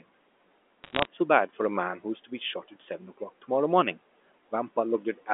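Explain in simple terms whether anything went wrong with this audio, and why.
Bit errors on a digital phone line are heard from 0.84 to 1.06 s as a brief burst of crackle and sharp ticks over the speech. The call travels as a stream of digital numbers, one per tiny slice of sound. Here a small share of those bits arrived flipped, so single slices jumped to the wrong value. When a flip hits an important bit, that slice leaps far off and clicks.

Speech cut by the noise suppressor happens between 2.63 and 3.0 s, where parts of the speech turn faint or sound swallowed, about a tenth of a second in all. The phone's noise-cleaning stage, built to quiet the background noise of the room, mistook soft bits of speech for that noise and turned them down along with it. The quiet room noise audible underneath is part of the recording, not a fault.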